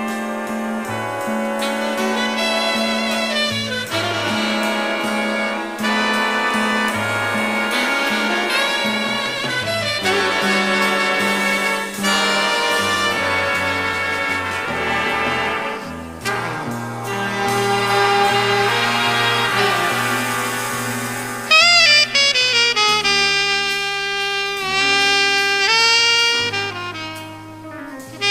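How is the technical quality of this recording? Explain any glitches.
The technical quality of the recording is sound, and there are no glitches to explain.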